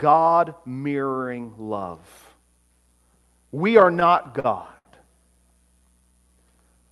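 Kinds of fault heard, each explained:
Repeated stalls (stutter): the buffer kept running dry around 3.9 to 4.9 s, so seven little gaps got filled by stretching the last sound, nothing lost, just draggy.
Jitter buffer slow-down: from 5.79 to 6.29 s the receiver repeated pitch periods to rebuild its reserve, adding 73 ms and playing at 88% speed, same pitch.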